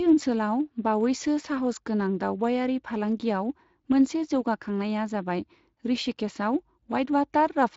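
Speech clip with Speex codec damage throughout. Coding artefacts are plainly audible, with a rough, hoarse edge from the coarse excitation. The sound suggests a bitrate near 20 kbps.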